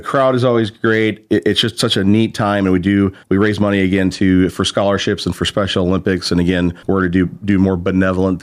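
No technical faults are audible.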